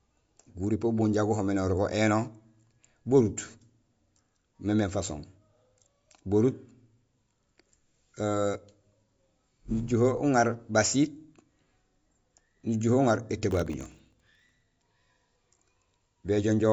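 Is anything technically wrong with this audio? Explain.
Yes, two faults are audible in this speech clip. Throughout, the audio sounds watery and swirly, with metallic chirping on s sounds and softened attacks, and nothing is heard above 7.6 kHz. This is likely MP3 compression at a low bitrate, around 48 kbps. The encoder cuts the treble at a fixed point and switches weak frequency components on and off between frames.

From 13.51 to 14.62 s, a gritty burst of crackle tears through the sound. This is processor overload crackle. The system repeatedly failed to fill very short buffers, under a millisecond each, dozens of times in a row, and each miss left a tiny hard-edged gap of silence.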